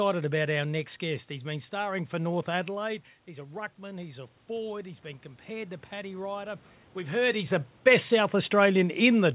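Speech, where the level falls by about 15 dB as the talker moves away from the microphone around 2.5 s. Automatic gain rising follows from 2.83 to 6.65 s: the gain control, finding the input too quiet, raises its gain gradually by about 6 dB. A talker simply leaning back in would lift only the voice, but here the room noise swells along with it, over several seconds. The sound stays band-limited to 4 kHz, which fits a narrowband G.711 call path.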